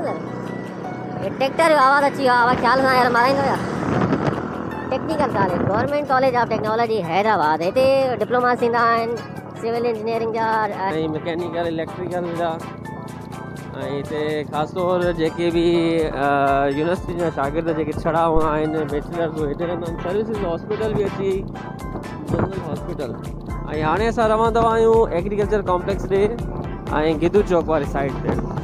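Likely playback against the wrong clock runs the section at the wrong speed from 0 to 10.9 s: 1.25 times too fast, pitched up about four semitones and hurried. A supply switching on a live input causes a phantom power thump at 18.36 to 18.52 s, a deep low-frequency bump decaying within 34 ms.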